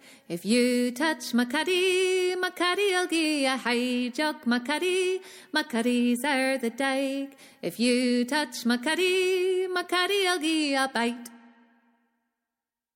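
No faults are audible anywhere in the recording.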